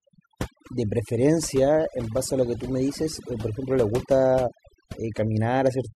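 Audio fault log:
Throughout, overdone noise removal: the denoiser's been pushed way too hard, so any frequency band sitting near its noise estimate gets clamped right down. The background drops and breaks up into little twinkling specks, and quieter bits of the speech get eaten along with it.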